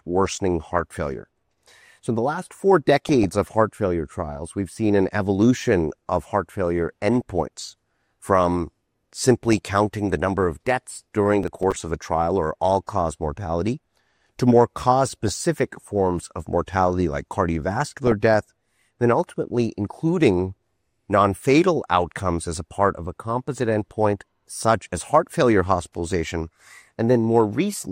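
The sound carries DAB burbling at 3.09–3.25 s, 9.48–9.58 s and 15.23–15.40 s. Bit errors slip past error correction and put short blips of noise into single sub-bands. Processor overload crackle follows at 11.43–11.81 s. About seven deadlines are missed, each replaying stale audio, which fits buffers of roughly 5 ms.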